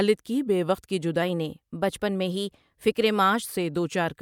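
Right after "کی بے وقت کی", at 1.22 s, the speech suddenly runs about 5.6% fast and sits roughly 94 cents sharp, close to a full semitone, until it drops back to normal at 3.52 s. Speed and pitch move together and both edges are abrupt, which points to a drift correction step, most likely clock-matching software nudging the playback rate in one jump to rebalance its buffer, then releasing it.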